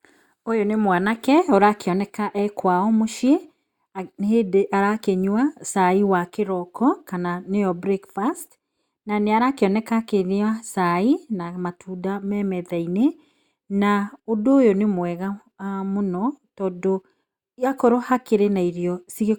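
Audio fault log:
Nothing to log here, this speech clip comes across without a single fault worth noting.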